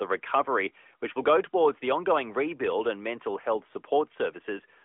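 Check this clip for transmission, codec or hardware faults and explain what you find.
No transmission, codec or hardware faults are audible here.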